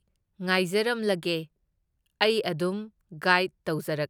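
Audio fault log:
Nothing stood out on listening to this speech recording.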